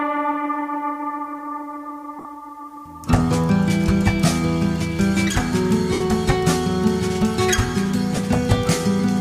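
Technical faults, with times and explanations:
2.19 to 2.25 s, 5.93 to 6.01 s and 8.16 s, lost LE Audio frames: Bluetooth LE Audio frames failed to arrive, and the LC3 decoder concealed each gap by repeating the last spectrum with scrambled phase signs. The first gap loses 45 ms spread over 60 ms, the longest unbroken stretch around 40 ms. The second loses 75 ms, and the third 15 ms, each fitting 7.5 ms frames. Each gap sounds like a brief noisy smear. At 5.93 s, the concealment also starts to fade.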